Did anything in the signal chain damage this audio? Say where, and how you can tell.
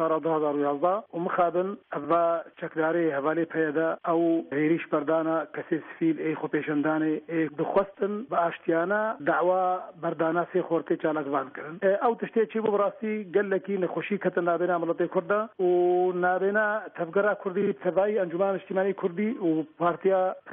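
Yes: repeated frames at the codec or storage stage. A 46.4 ms block replays once at 2.03 s and twice at 17.61 s, so the sound stutters rather than drops out.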